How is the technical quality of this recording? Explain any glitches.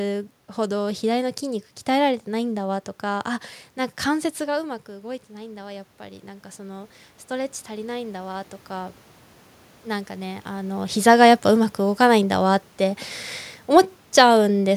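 There's one real glitch, an automatic gain rising from 4.53 to 9.03 s. Just after the talker moves away around 4 s and the level falls by about 13 dB, the automatic gain control slowly winds its gain up by about 8 dB, so the voice and the room noise swell together over those four and a half seconds.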